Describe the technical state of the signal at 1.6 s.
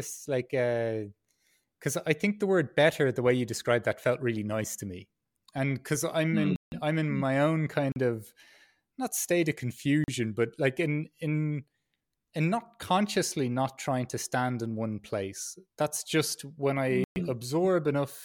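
At 1.6 s the speech signal is intact, with no dropout, clipping, distortion or other technical fault.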